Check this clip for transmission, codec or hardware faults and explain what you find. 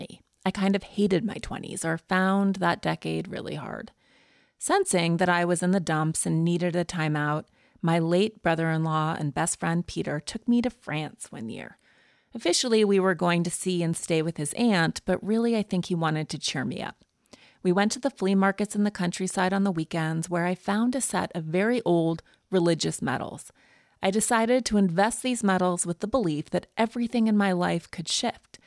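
I went over the speech recording and didn't hear anything amiss at all.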